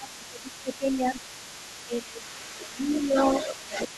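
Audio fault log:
Throughout: other side's voice leaking through. A faint second voice sits under the speech, roughly 20 dB down. The echo canceller likely left part of the loudspeaker signal in.
0.0–1.22 s, 1.86–3.16 s, 3.44 s to the end: speech suppressed in double talk. The speech dips by about 10, 15 and 20 dB. This is likely the canceller turning down both talkers at once.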